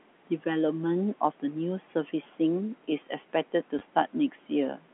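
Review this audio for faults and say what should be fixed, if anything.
Packet loss with last packet repeated at 3.79 to 3.81 s: 20 ms went missing and was filled by replaying the previous packet, producing a brief stutter. Proper packet loss concealment or forward error correction at the receiver would prevent it.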